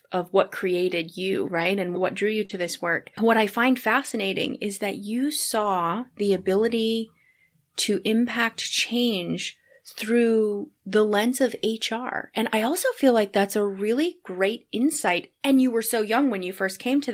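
Lost packets rebuilt from error correction at 1.55 to 1.65 s, 2.49 to 2.67 s (right after "what drew you"), 4.05 to 4.11 s (between "I find" and "is that you"), 5.51 to 5.65 s, and 14.97 to 15.19 s. Each stretch lasts 40 to 120 ms, which fits runs of two to six lost 20 ms packets. The decoder played the low-bitrate copies carried in the following packets, so nothing drops out, but those moments turn grainier and noisier.

Short concealed packet loss at 2.45 to 2.51 s, also just after "what drew you," overlapping the start of the second rebuilt stretch. About 40 ms arrived too late for any copy to help. The receiver extended the preceding sound across the gap and then crossfaded back into the real signal, which leaves a brief smeared wobble.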